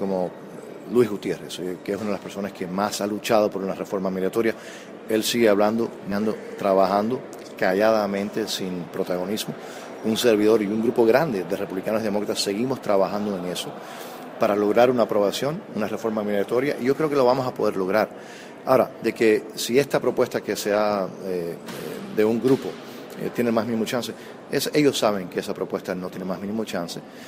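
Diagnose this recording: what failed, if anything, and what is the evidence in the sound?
Network and jitter buffer stage. At 6.11 s the sound jumps forward with no gap. This is a skip ahead. Roughly 0.4 s of audio was dropped while later audio was already queued. The two edges are butted straight together, so the flow lurches.

A jitter buffer speed-up follows, from 6.69 to 7.04 s. The sound runs at about 112% of normal speed, with unchanged pitch. The buffer was holding too much. It trimmed short pitch-period slices, about 50 ms in total, to pull the delay back down.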